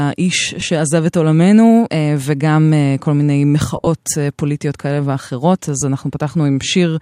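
At 0.60 to 0.62 s, 3.76 to 3.87 s and 5.80 to 5.82 s the speech shows lost LE Audio frames. The LC3 decoder filled each gap by repeating the last spectrum with random signs, so the sound briefly turns into a noisy smear. On a spectrogram the harmonics blur into broadband hash. The middle loss is scattered dropouts totalling 75 ms, the longest run about 30 ms, and shows several smeared patches rather than a fade to silence.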